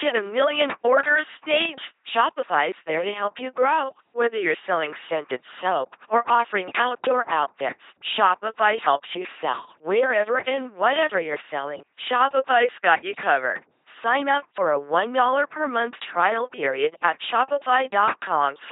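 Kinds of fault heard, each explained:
LPC-10 vocoder: the speech is rebuilt from a ten-pole vocal tract filter excited by either a pulse train or noise, giving a heavily damaged, buzzing robotic voice that fits a 2.4 kbit/s rate. A spectrogram shows rigid harmonic stripes and nothing above 3.8 kHz.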